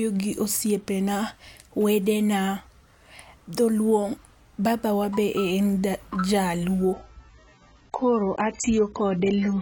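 At 6.93 s the speech suddenly drops in quality and stays that way to the end: an adaptive stream at a lower bitrate. The connection slowed, so the player switched renditions without a gap. Everything above 8 kHz vanishes and codec artefacts thicken, which fits roughly 16 kbit/s AAC.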